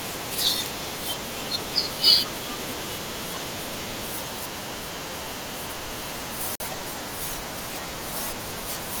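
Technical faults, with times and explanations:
6.55 to 6.60 s, Bluetooth stall: the speech cuts to complete silence for 46 ms, then carries on. The likely cause is radio interference holding up packets. The headphone buffer ran empty, so playback paused until the resent audio arrived.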